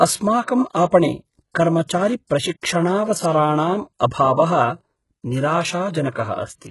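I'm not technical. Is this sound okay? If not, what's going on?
No, not quite. Throughout, the speech has a gritty, metallic top end, with s sounds coming out lispy, and nothing at all above about 11.4 kHz. That's likely HE-AAC compression, which fakes the treble by copying lower frequencies upward rather than keeping the real detail.

There's also pre-echo at about 0.44 s and 6.11 s: a short hiss creeps in roughly 40 to 45 ms before a sharp attack, so the start sounds soft and smeared. The codec spreads its noise across a whole chunk of audio, including the quiet moment just before the sound hits.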